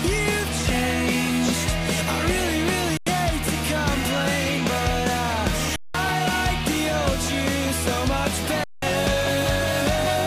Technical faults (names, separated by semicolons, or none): underrun with held sample